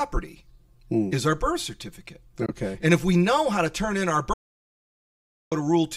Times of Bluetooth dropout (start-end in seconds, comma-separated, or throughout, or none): 2.46-2.51